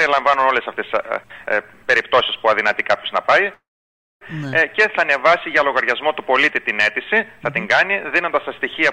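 Around 3.53 to 4.23 s the sound stops mid-flow and hangs for about 0.7 s. The last bit smears into a short fading buzz, then goes quiet for roughly 0.58 s, and picks up exactly where it left off. Nothing's skipped, it's just pushed later by that same 0.68 s. That's a classic call audio freeze, likely packets stalling in transit until the jitter buffer drained and the receiver stretched out the tail while it waited.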